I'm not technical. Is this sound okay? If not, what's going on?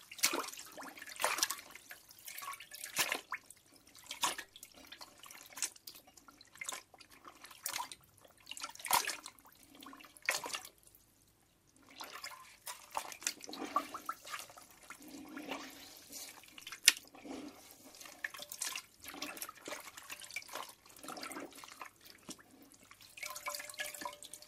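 No. From 5.24 to 6.00 s there is DAB burbling: a bubbly, watery disturbance. It comes from weak digital radio reception, where some corrupted data slips past the error correction and garbles small slices of the sound, giving brief blips and wobbles.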